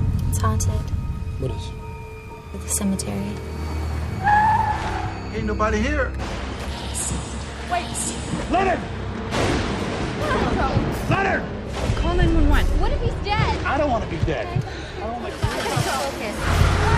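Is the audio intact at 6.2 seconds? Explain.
Yes, the audio is intact at 6.2 seconds, with no dropout, click, distortion or other fault audible at that point.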